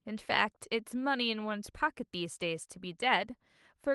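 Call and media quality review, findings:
No faults heard in this clip.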